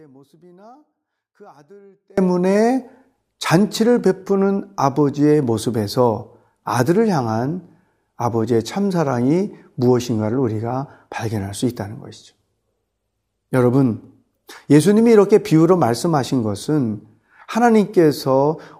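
The signal path likely lost its source while the chain after the break stayed live, producing an audio dropout to a faint residue in this speech recording. The dropout is already under way when the clip begins and lasts until 2.18 s. Until then only a faint leak of the sound remains, roughly 30 dB below its normal level. At 2.18 s full-level speech returns abruptly rather than fading in or following a natural pause.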